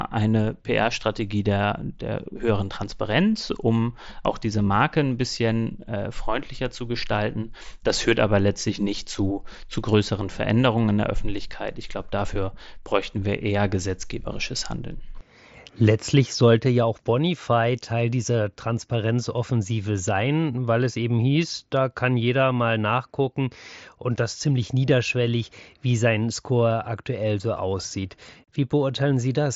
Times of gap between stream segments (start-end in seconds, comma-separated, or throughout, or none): none